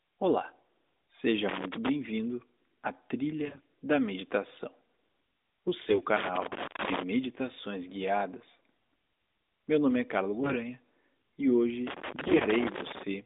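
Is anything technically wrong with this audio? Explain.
Yes. The speech comes through a narrowband mobile channel, with the band running from about 250 Hz to 3.7 kHz and light codec colouring that fits AMR-NB at 12.2 kbps. Two faults sit on top of that channel.

Loose connector crackle appears from 1.49 to 1.89 s and again from 11.87 to 13.03 s. Each is an irregular burst of scratching and crackle lasting about 0.4 s and 1.2 s. The cause is a worn or dirty contact. As the contact shifts, it repeatedly makes and breaks the circuit, so the signal is chopped into fragments. Any DC on the line adds pops at each break.

AMR bit errors occur at 3.46 to 3.63 s, 5.90 to 6.02 s, 10.38 to 10.58 s and 12.28 to 12.44 s. The last one overlaps the second crackle burst. In each of these short stretches the voice keeps roughly its pitch and level but turns hoarse, scratchy and gargly. On a weak radio link, several percent of the lightly protected bits, up to around a tenth of them, arrived flipped. 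The frames were still accepted, so misplaced excitation pulses and wrong fine pitch, gain and spectral values were decoded as if they were correct.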